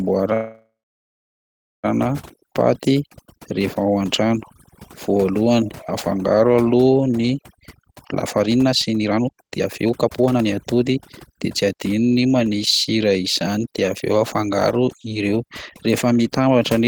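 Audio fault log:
throughout: overdone noise removal. Bands near the noise estimate are cut hard or removed, along with quiet speech detail, so pauses drop to near silence with twinkling specks. A spectrogram shows an empty floor, scattered isolated dots and ragged harmonics.
0.33 to 1.86 s: call audio freeze. The sound stalls for 1.5 s: the last sound continues as a fading buzz or hiss, then about 1.12 s of silence, and speech resumes where it stopped with nothing lost. Likely delayed packets emptied the jitter buffer. The waveform shows a decaying smear, then a flat line.
7.57 to 12.54 s: jitter buffer speed-up. Speech runs at 130% speed with unchanged pitch and sounds hurried, as the receiver repeatedly cuts pitch-period-length pieces to shed excess buffered delay, roughly 1.5 s in all. On a spectrogram, syllables and pauses look compressed in time while harmonic spacing stays the same.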